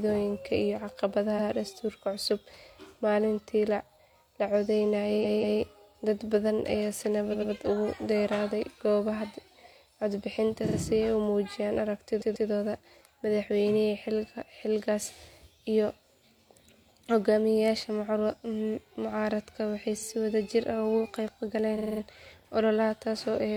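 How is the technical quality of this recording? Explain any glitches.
The recording stutters at seven points because of repeated frames. Short blocks of compressed audio play again, adding time. Repeats occur at 1.35, 5.21, 7.29, 10.64, 12.17, 19.97 and 21.74 s. Blocks run from about 46 to 186 ms. The 21.74 s block repeats five extra times, a rapid 0.23 s stutter.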